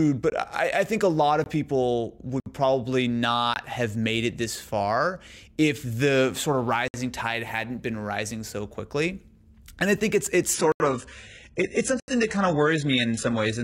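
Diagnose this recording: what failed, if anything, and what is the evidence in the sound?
The buffer or driver stage is dropping out. There are blocks of digital silence at 0.30–0.32, 1.44–1.46 (right after "I think a lot"), 2.40–2.46, 3.54–3.56, 6.88–6.94 (between "if the sort of" and "tide hadn't been rising"), 10.72–10.80 and 12.00–12.08. Each one cuts out hard and back. The 20 ms ones land as short holes, and the 60–80 ms ones open up as audible holes. That's likely the output buffer not getting filled in time.

The network and codec stage shows the adaptive stream dropping to a lower bitrate at 10.54, just after "I think it's it's", and it stays there to the end. The switch is instant with no gap. The treble collapses, with nothing above about 11.1 kHz, and the top end turns thin. That sounds like a jump from a roughly 96 kbit/s AAC rendition down to something like 12 kbit/s HE-AAC, where the highs get reconstructed rather than coded, because the connection slowed.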